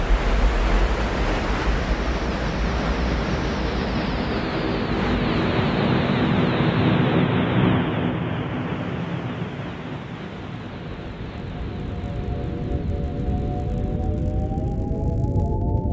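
From 10.5 s to 15.6 s a resampler restarted on every block produces a steady 50 Hz buzz riding on the sound. Each 20 ms block was converted in isolation, consistent with a 24 kHz to 16 kHz conversion, leaving a small error at every block boundary.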